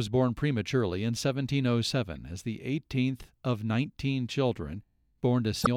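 A brief disruption in the speech at 2.15 s, and a longer one from 5.61 to 5.67 s, lasting about 66 ms, mark damaged data in a compressed stream. At those points part of the encoded file was corrupted, so the decoder misread or rejected the affected frames, lost its sync and had to search for the next valid frame header. Both stretches of speech are broken by the decoder's failed frames.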